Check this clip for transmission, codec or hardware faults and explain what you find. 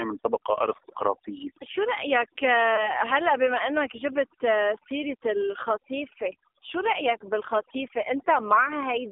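Three faults are present. Two run through the whole clip and one is a brief dropout.

Overdone noise removal affects the entire clip. A noise reducer set too aggressively has pushed frequency bands close to its noise estimate down to almost nothing. Quiet parts of the speech were removed along with the noise. The background is near-silent with twinkling specks.

The AMR narrowband mobile codec is also present throughout. This is the 2G and 3G phone speech codec. It rebuilds the voice from a vocal tract model excited by a few pulses. The band runs from about 300 Hz to 3.6 kHz. Damage is heavy, with a buzzy, synthetic tone that fits a low rate of around 5.9 kbps.

Lost AMR speech frames occur from 2.76 to 2.91 s. A frame failed its checksum, so the decoder repeated the last good pitch and vocal tract settings at falling gain. The result is a short dip or warble, which fits a single 20 ms lost frame. 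The speech then comes back briefly weak or rough.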